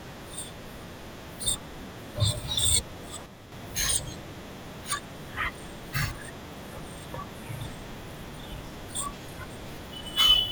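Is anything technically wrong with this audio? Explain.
Yes. A sudden gain jump occurs between 3.26 and 3.52 s: the level of the speech drops abruptly by about 6 dB and then returns, with no fade in or out. The background noise falls and rises with it at the same instants, which points to a change in digital gain rather than anything at the source. The likely cause is a gain setting or bit shift applied from one sample to the next without a ramp.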